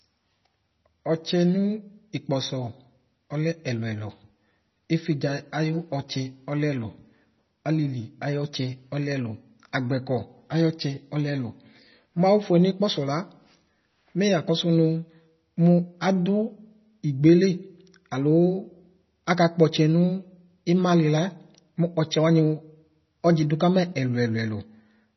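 Throughout the speech, nothing sounds above about 5.9 kHz, and the sound is heavily watery and swirling, with metallic chirps on s sounds, likely from MP3 compression at a very low bitrate near 24 kbps. Those shifting artefacts set it apart from plain low-pass filtering.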